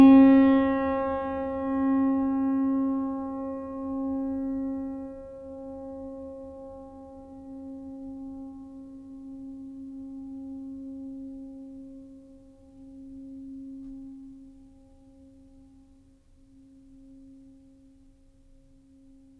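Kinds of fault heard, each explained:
Wrong sample rate: the music runs slow and sits low throughout, playing at about 0.92 times its proper speed with every pitch dropped by roughly one and a half semitones (1.47), so it sounds heavier and slightly dragging. Speed and pitch fall together because the samples are being clocked out slower than they were captured, with no conversion in between. The ratio fits material recorded at 24 kHz but played back at 22 kHz.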